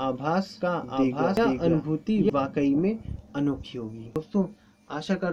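From the very start, the sound is doubled. A second full-band copy runs about a second behind the first, at roughly the same level. It carries no decay and no room colour, so it is not an echo. It simply stops, abruptly, at 2.30 s. This is a doubled audio track. The likely cause is the same signal being captured twice, with one path running slower, or an edit leaving two copies out of step.

At 1.37 s, inside that doubled stretch, a short blip cuts through. A second one comes at 4.16 s. These are damaged data in a compressed stream. Bytes in the file or stream were lost or corrupted there. The decoder misread those frames, lost sync and had to hunt for the next valid header.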